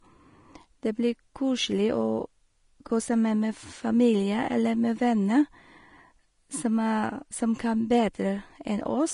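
From start to finish the speech shows what is likely Vorbis compression at a low setting, with damage that is plainly audible. The encoder has discarded everything above about 10.6 kHz and coded the remaining treble so coarsely that fine detail is replaced by noise of similar energy, which fits a rate around 32 kbps. The result is a hissy, grainy top end, roughened tones and softened, smeared consonant attacks.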